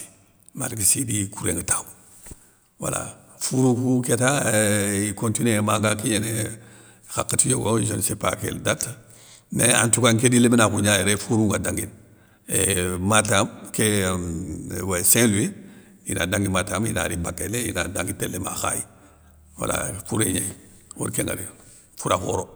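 Nothing in this speech recording stands out as a technical fault, so there's nothing here to flag.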